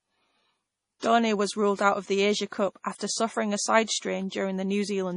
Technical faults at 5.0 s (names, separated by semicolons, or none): MP3 compression